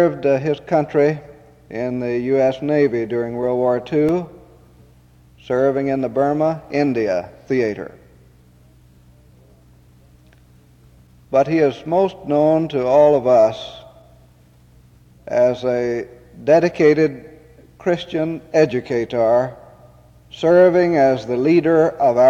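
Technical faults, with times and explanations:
3.45–4.94 s, CD scratch ticks: eight brief ticks, the longest a couple of milliseconds, at a steady five or so per second. Once per disc turn, a blemish corrupts more data than error correction can rebuild, and the player patches it. That rotation-locked regularity distinguishes it from random vinyl crackle.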